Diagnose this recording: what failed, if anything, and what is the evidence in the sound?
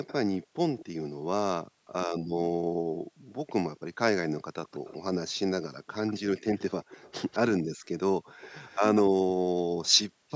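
In the call processing, an echo leak likely let the far-end loudspeaker's sound back through the canceller: faint delayed speech copies, roughly 0.19 to 0.21 s late, at 0.07–0.85, 3.77–4.91, 6.07–9.02 and 10.29 s.

In the call processing, the background was gated by the echo canceller, which clamped the microphone during playback: room sound dips about 40 dB intermittently over 0.39–3.34 s, and at 7.75–7.88 and 10.09–10.29 s.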